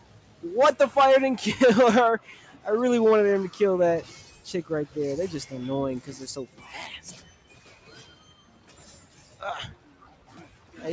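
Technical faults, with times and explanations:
Throughout: noise suppressor applied to music or sounds. A suppressor tuned for speech stayed on, so it keeps treating sustained tones, ambience and reverb as noise and pulling them down. The level swings by around 10 dB as it decides what to keep. Onsets get through, but anything held or decaying sinks, so the sound pumps and thins out. The top end stops near 8 kHz, as expected from the call microphone processing, and isn't part of this fault.
0.00–0.43 s, 2.41–2.65 s, 6.47–6.62 s, 7.21–7.89 s, 8.07–8.79 s, 9.00–9.40 s, 9.75–10.74 s: sound cut by the noise suppressor. In these stretches the suppressor mistook the sound for noise and dipped it harder than the rest, by about 7 dB at the start and about 6 dB elsewhere. Sustained parts and tails drop away early while sharp attacks survive. The longer runs late in the clip sound like the body of the sound collapsing.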